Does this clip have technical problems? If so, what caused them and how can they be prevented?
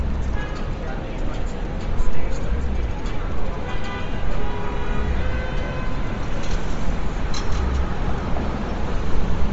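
Yes. Throughout, the sounds are cut off above 7.7 kHz and carry a grainy, breathy haze in the top end, the kind you get when the codec discards upper detail and fills it with noise. It's likely Bluetooth LC3 compression, running at a low bitrate around 32 kbps. To prevent it, record over a wired connection or set the Bluetooth link to a higher LC3 bitrate.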